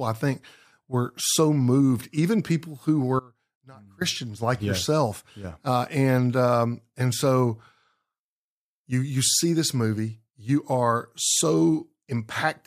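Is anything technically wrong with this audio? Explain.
Yes. Between 3.20 and 4.01 s there is an audio dropout to a faint residue, just after "moved even people who" and ending as "like yeah yourself" begins. For about 0.82 s the speech is abruptly cut and replaced by a faint leak of sound roughly 25 dB below normal. The likely cause is a brief loss of the wanted signal while the path after the break stayed live. The sharp edges and the residue set it apart from a natural pause or fade.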